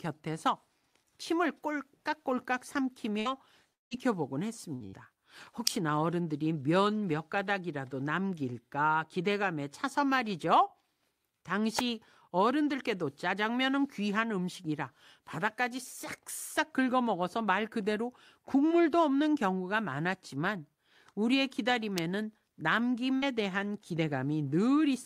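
Speech with network and electrical faults. Four bursts of packet loss fall at 3.19–3.28 s, 4.75–4.83 s, 4.86–4.96 s and 23.17–23.25 s. Each time about 60 ms of audio is missing. The receiver bridges the hole with roughly 55–60 ms of the last sound stretched and fading, heard as a brief held buzz or hiss before the speech picks up further along. The two at 4.75 and 4.86 s sit almost back to back. Between 3.73 and 3.94 s the gap is much longer, about 180 ms missing, and it points to a long network dropout as the likely cause. The same smeared continuation starts but keeps decaying until roughly 160 ms of it is effectively silence. That silence, which the short bursts never reach, is what separates a dropout from a burst loss, along with the greater length. The third kind is the electrical switching spike, a sharp snap or tight cluster of clicks at 5.67 s, 11.79 s and 21.98 s. Each lasts only a few milliseconds and lies on top of the speech without removing any of it. 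Unlike the loss events, nothing is held, faded or skipped, so the sound before and after runs on unbroken. Such isolated arcs most likely come from a nearby switch, relay or static discharge coupling into the audio line.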